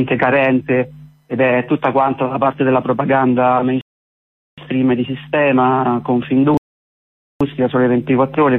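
At 3.81 to 4.58 s and 6.57 to 7.41 s, rebuffering stalls insert silence of 0.77 and 0.83 s; unlike dropouts, playback resumes exactly where it stopped, losing nothing.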